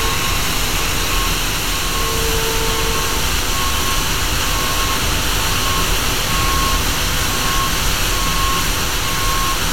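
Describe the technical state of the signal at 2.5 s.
At 2.5 s the signal is intact, with no dropout, distortion or other fault present at that moment.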